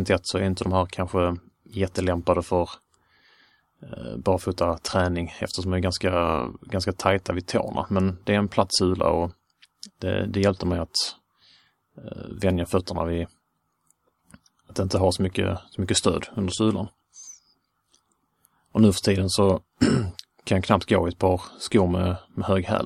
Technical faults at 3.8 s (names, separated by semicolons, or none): none